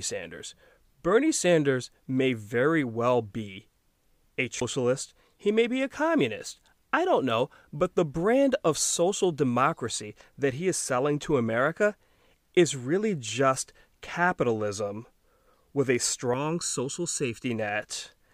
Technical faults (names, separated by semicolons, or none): CD skip; channel delay (comb filtering)